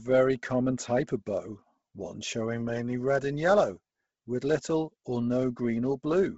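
Speech, likely squeezed through Bluetooth LC3 compression at a very low bitrate throughout, leaving nothing above 7.7 kHz and a heavily grainy, breathy noise-filled edge that fits roughly 16 kbps with 10 ms frames.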